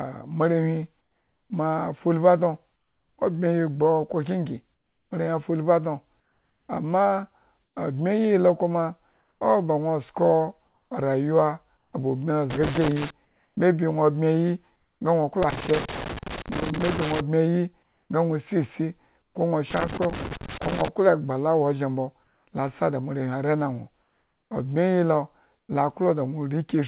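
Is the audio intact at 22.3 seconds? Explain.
No: comfort noise in place of the background, 22.24 to 22.47 s, between "egba la ozhen mbo" and "la sa da moarewhi". Likely discontinuous transmission, so the real background becomes steady, featureless noise about 2 dB quieter.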